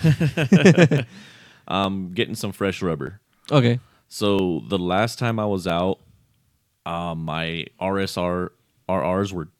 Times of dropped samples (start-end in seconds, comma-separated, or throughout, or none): 0.98, 1.84, 3.07, 4.39, 5.70, 7.28